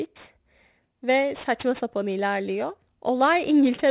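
Aliasing runs through the whole clip. The speech was brought down to a lower sample rate with no filter first, which fits a drop to 8 kHz. Energy above the 4 kHz half-rate point was not removed. It folds back below 4 kHz onto wrong, unrelated frequencies. The folded content sits roughly 20 dB under the speech. Sibilants sound gritty and metallic, and the spectrum stays full right up to the 4 kHz edge.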